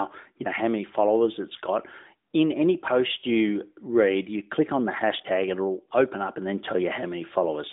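There are no technical faults to describe at any point in this speech.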